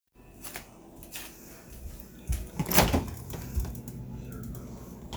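A recording of sounds has a click about five times from 0.92 s to 5.15 s, strictly every 1.06 s. Likely clock drift buffer slips: mismatched clocks force small sample blocks to be dropped or repeated. The steady spacing rules out random dropouts.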